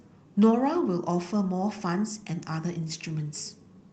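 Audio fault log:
No faults are heard in this speech clip. The Opus voice compression is audible only as light coding, with the full band kept, which fits its hybrid mode at a moderate bitrate.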